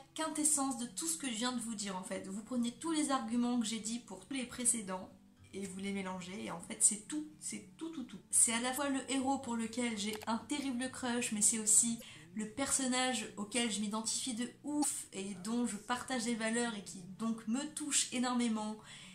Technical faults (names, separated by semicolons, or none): damaged data in a compressed stream